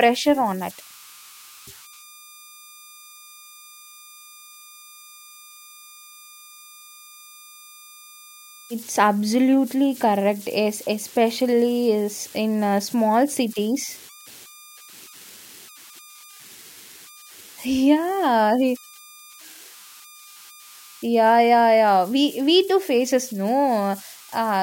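Right from the start and all the way through, there are converter idle tones. The delta-sigma converter seems to be running without dither, so whenever the speech gets quiet it settles into repeating bit patterns that whistle, here somewhere around 1 kHz. You catch them as a thin whine in the pauses and a gritty texture under softer syllables, sitting at about 25 dB below the signal.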